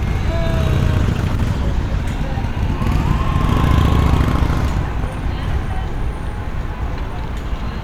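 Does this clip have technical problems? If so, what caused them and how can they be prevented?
Yes. From 0.99 to 2.11 s, a call bitrate drop makes the sound muffled and watery, consistent with roughly 13 kbps instead of 128. Unlike packet loss, there are no gaps. Better bandwidth estimation and a bitrate floor would prevent this.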